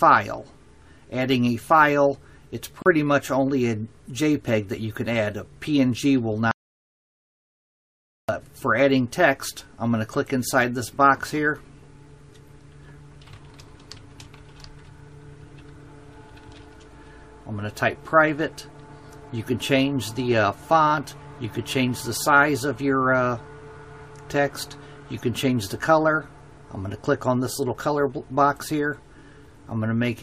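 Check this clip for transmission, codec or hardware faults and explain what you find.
Two faults are audible: a short silent gap where separately encoded pieces were joined, and a longer dropout to total silence.

At 2.82 to 2.86 s there is a gap at a join of encoded pieces. Two segments were spliced without trimming the encoder's start delay and end padding, leaving about 37 ms of silence. The sound breaks with smeared edges, then resumes where it stopped.

From 6.51 to 8.29 s there is an audio dropout to silence. The input was likely lost, through a disconnection, link failure or accidental mute, while writing continued with silence. For 1.77 s the sound vanishes completely, with no background tone, and whatever occurred then is missing.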